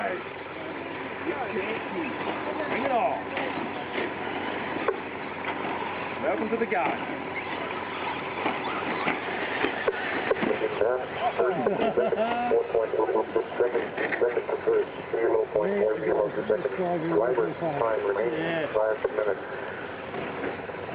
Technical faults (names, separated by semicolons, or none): none